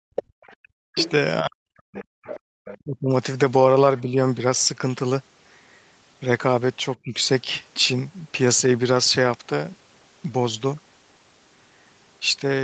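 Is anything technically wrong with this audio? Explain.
Yes. The echo canceller caused three kinds of fault.

Speech suppressed in double talk, from 0.12 to 4.17 s and from 7.01 to 7.17 s: with both sides talking at once, the canceller likely could not tell the talker from the loudspeaker echo, so it turned both down. The speech dips by up to about 40 dB, for roughly a second in total in the first stretch, and by about 25 dB for roughly 150 ms in the second.

The other side's voice leaking through, from 0.16 to 2.78 s and from 6.94 to 7.81 s: far-end audio from the loudspeaker likely reached the microphone and was not fully removed. A second voice can be heard under the speech. It sits about 10 dB below the speech in the first stretch and fades to about 30 dB below in the later one.

Background gated by the echo canceller, from 2.18 to 2.52 s: while the loudspeaker was playing, the canceller clamped the microphone hard. 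The room sound drops by as much as about 40 dB, for roughly 200 ms in total, then comes back when the canceller releases.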